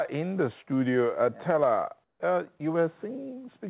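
Comfort noise in place of the background appears from 2.04 to 2.20 s: for those 160 ms the real background, which sits about 50 dB below the loudest parts, is replaced by a smooth, featureless hiss about 8 dB quieter. This is likely discontinuous transmission, where the sender stops sending during what it judges to be silence and the receiver fills the gap with synthetic noise. The texture of the background vanishes briefly and returns when full audio resumes. Sound dropped by the voice detector follows at 2.58 to 2.60 s, a 20 ms stretch where about 10 ms of actual sound is lost and steady synthetic noise takes its place. The likely cause is the sender's voice detector misreading a quiet portion of the sound as background and cutting transmission until it triggered again, so a tiny sliver of the signal is swallowed rather than faded. Throughout, nothing reaches above 4 kHz, which fits a narrowband telephone codec such as G.711 on the call path.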